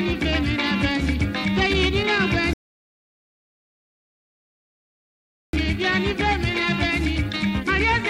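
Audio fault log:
2.53 to 5.53 s, rebuffering stall: the player exhausted its store of downloaded audio and halted playback until fresh data arrived, so the sound drops abruptly into silence for 3 s. When enough had come in, playback picked up at exactly the point where it had frozen, with nothing skipped or repeated. The gap therefore adds 3 s of dead air to the running time rather than removing any of the audio itself.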